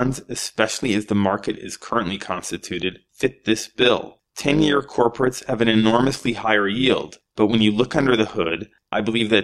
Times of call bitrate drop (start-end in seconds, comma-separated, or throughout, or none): none